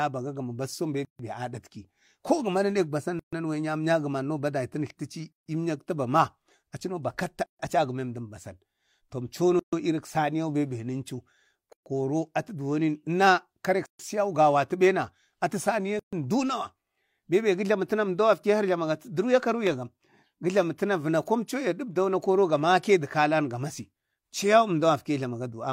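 Gaps at joins of encoded pieces open in the speech at 1.05, 3.19, 5.33, 7.46, 9.59, 11.73, 13.86 and 15.99 s, one after every 2 s of audio. The first lasts about 145 ms, the rest about 133 ms. Each 2 s piece was encoded separately and spliced without trimming, so encoder start-up delay and last-frame padding remain as silence. The dropouts have smeared edges, and the speech resumes exactly where it stopped.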